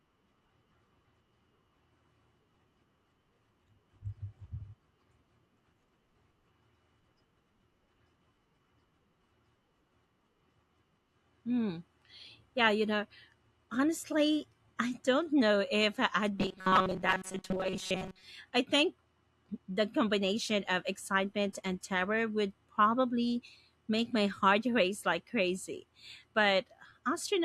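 From 16.39 to 18.24 s, after "don't know if I'd" and before "I think", the voice becomes a rigid metallic buzz at 188 Hz: robotic sound from repeated short buffers, likely a roughly 5 ms chunk looping for most of that stretch.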